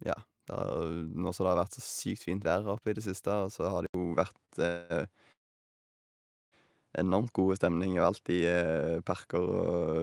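At 3.86 s, just after "så har", the recording likely switched its input to a poorer device. An 80 ms silence marks the switch, and from there to the end the band stops near 11.4 kHz, so the speech loses its top air and sounds duller. The level shifts by roughly 5 dB, and a new background noise sits around 50 dB beneath the signal.

From 4.45 to 4.52 s there is a short stall from a late packet. A packet missed its playout time, the jitter buffer ran dry, and the receiver stretched the last sound for 32 ms until the packet arrived. Playback then resumed from the same point, so nothing is lost, but a sound is held slightly too long, with a faint buzz.

Two call audio freezes follow, likely caused by packets held up in transit that left the jitter buffer empty. From 4.67 to 4.93 s the receiver filled 232 ms by extending the last sound, which is heard as a brief buzzy hold with no full silence. 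From 5.32 to 6.55 s the wait lasted about 1.2 s. The filled sound faded quickly, leaving roughly 1.16 s of silence. When the delayed packets arrived, the speech continued from where it had stopped, so each freeze inserts a gap rather than cutting anything out.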